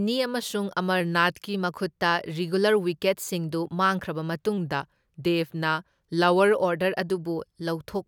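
From 1.01 to 1.54 s, and again from 4.58 to 6.54 s after "ꯔꯤꯒꯨꯂꯔ ꯋꯤꯀꯦꯠꯁꯤꯡꯗꯨ ꯃꯥꯡꯈ꯭ꯔꯕ", the speech slows by 5.5% and drops about 99 cents, nearly a semitone, then snaps back. This is a drift correction step, likely a clock-matching resampler abruptly changing rate.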